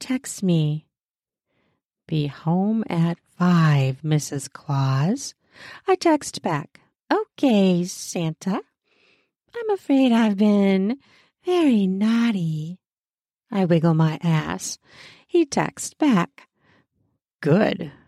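Speech recording; no technical faults detected anywhere in it.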